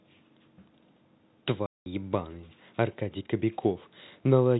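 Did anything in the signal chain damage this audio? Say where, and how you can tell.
Yes, at the network stage: packet loss filled with silence. From 1.66 to 1.86 s the speech drops into a hard 200 ms hole with abrupt edges, which fits ten consecutive 20 ms packets going missing while the receiver inserted zeros. The gap's length matching a whole number of packets, and the absence of any smeared or repeated sound, distinguishes it from concealment or a buffer underrun. The narrowband G.711 telephone coding beneath it sounds intact.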